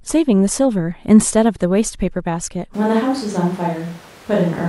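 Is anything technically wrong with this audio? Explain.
Yes. A switch to a distant microphone happens at 2.74 s and lasts to the end. From that moment the speech turns abruptly roomy and hollow, with thinner bass and an audible bed of room noise around 25 dB below the speech, while the overall level stays about the same. The cause is likely that the close microphone's feed dropped out or went unused, leaving a pickup farther from the talker that captures more room reflection and ambience.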